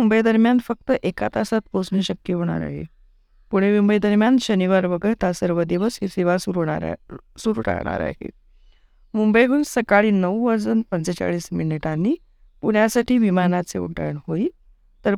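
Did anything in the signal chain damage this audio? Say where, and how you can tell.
No, nothing in this speech recording stood out as damage from any stage of the signal chain when I listened to it.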